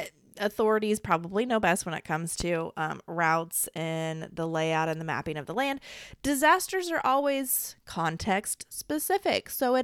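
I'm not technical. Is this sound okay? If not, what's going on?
No. Something in the recording chain, likely a plug, switch or static discharge, sent a brief electrical jolt into the signal. At 2.40 to 2.44 s, just after "best when it comes", that jolt comes through as a single loud pop, clearly louder than the speech, which carries on underneath.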